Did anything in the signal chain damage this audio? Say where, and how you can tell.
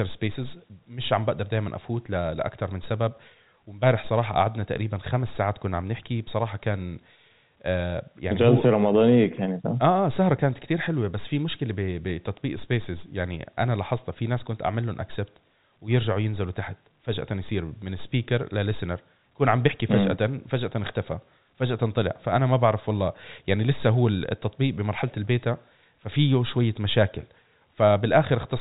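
No, nothing in the signal chain damaged this speech. It has gone through G.711 telephone coding, heard as a band that stops at about 3.8 kHz with at most a faint level-following hiss beneath it, which is just how that telephone format normally sounds.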